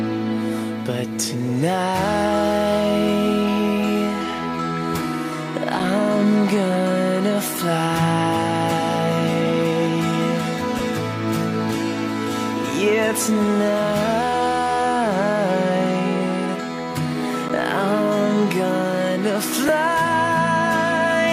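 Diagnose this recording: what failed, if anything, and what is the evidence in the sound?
Block of digital silence at 5.79 s and 17.49 s, lasting about 5.8 ms and 11.6 ms: a driver or buffer underrun zeroed output, fitting 256- and 512-sample buffers, each gap short enough to be heard as a tick or dip.

Lost LE Audio frames at 10.79 s and 19.68 s, each about 10 ms: a dropped Bluetooth frame made the LC3 decoder conceal it, smearing tones into brief noise.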